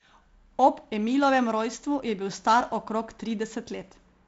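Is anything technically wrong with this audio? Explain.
No, nothing is technically wrong: this is speech carried over G.722 wideband telephone coding, with content ending near 7.7 kHz and the light upper-band hiss that coding gives.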